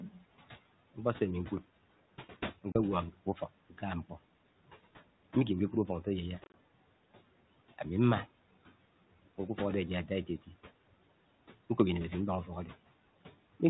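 Noise suppressor artifacts run through the whole clip. The suppressor pulls the room noise down by about 17 dB in the gaps between phrases and lets it back up under the speech.

At 2.72 to 2.76 s, packet loss on an ADPCM call leaves a hard-edged 30 ms hole, likely about three packets dropped and filled with silence. Afterwards the decoder's predictor and step size no longer match the sender's, so the speech comes back slightly distorted before it settles.

From 3.13 to 3.42 s, the noise suppressor cuts speech. It mistakes parts of the speech for background and turns them down by up to about 12 dB, over roughly a tenth of a second in total. Those soft sounds come across as swallowed.

Between 6.44 and 6.55 s, a second run of packet loss removes 70 ms of audio in scattered gaps across 100 ms. The longest gap is 30 ms. Each restart brings a moment of distortion as the ADPCM decoder resynchronises. 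The 32 kbit/s G.726 coding underneath does only light damage.

At 10.27 to 10.5 s, the suppressor cuts speech again, this time by up to about 14 dB over roughly 100 ms, so that part of the speech is turned down and sounds faint.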